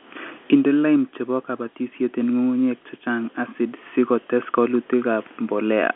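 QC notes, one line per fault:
No faults are audible in this clip. The speech arrives through G.711 telephone coding, with the band held to roughly 250 Hz to 3.4 kHz and nothing above about 3.7 kHz.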